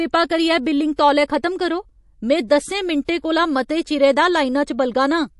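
MP3 compression runs through the whole speech clip, audible as a dulled top end and watery swirling, likely from an MP3 encode at a bitrate near 48 kbps. Pre-echo follows at 0.96 s, just after "करियै बिलिंग", at 2.48 s, and at 3.05 s, just before "कोला मते चिरै दा": each attack is preceded by hiss lasting 23, 25 and 34 ms, about 19, 13 and 19 dB above the quiet before it, because each attack's quantisation noise spread across a roughly 48 ms block that never switched to short blocks.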